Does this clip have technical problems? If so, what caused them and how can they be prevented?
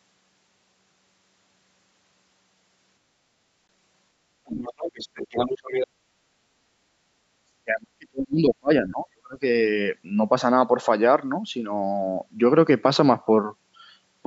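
Yes. At 3.68 s there is a Bluetooth dropout: the sound vanishes for about 15 ms and then resumes as though it had kept playing underneath. The likely cause is a single audio frame that failed to reach the headphones in time, so the receiver had nothing to play and output silence until the next good frame arrived. Keeping the phone close to the headphones, with a clear line of sight and less 2.4 GHz congestion, prevents this.

Speech suppressed in double talk occurs twice, briefly from 4.43 to 4.58 s and for longer from 7.64 to 9.36 s. In both stretches the talker's level falls sharply, by roughly 30 dB in the first and 35 dB in the second, so the sound is pushed far down while it is still being spoken. This is likely the echo canceller mistaking simultaneous talk for loudspeaker echo and attenuating everything it hears. A headset, or an echo canceller with better double-talk detection, prevents this.

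The other side's voice leaks through from 4.55 to 5.87 s, sitting only about 5 dB below the main talker, so it is clearly audible as a second voice. It likely comes from the far end playing on a loudspeaker and being picked up by the microphone, where the echo canceller failed to remove it completely. It overlaps the first suppression, which fits the canceller struggling during that exchange. Using headphones rather than a loudspeaker, or lowering the playback volume, prevents this.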